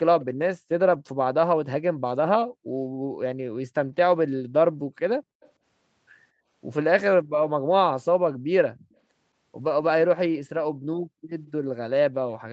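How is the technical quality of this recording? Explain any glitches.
The recording has two kinds of glitches: brief echo leaks and two short stretches rebuilt after packet loss. The sound stops at 8 kHz, as the call's bandwidth allows.

Echo leak, 0.21–0.25 s and 5.41–5.5 s: The likely cause is that one side played the call through a loudspeaker and its echo canceller failed to remove everything its microphone picked up, so part of it returned. You hear a faint copy trailing the sound by about 212 ms. It is quiet, roughly 25 dB below the main signal in the first instance and roughly 35 dB below in the second, and short enough to come across as a brief scrap.

Lost packet rebuilt from error correction, 0.93–0.95 s and 9.61–9.67 s: Audio data went missing in transit, but the following packets carried reduced-quality backup copies, and the decoder played those instead of leaving silence. The first repair spans about 20 ms, which fits one lost packet. 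The second spans about 40 ms, which fits two. There is no dropout, but these moments sound briefly grainier and noisier, a rough patch rather than a gap.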